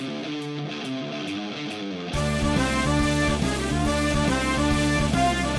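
No technical faults can be heard anywhere in the clip.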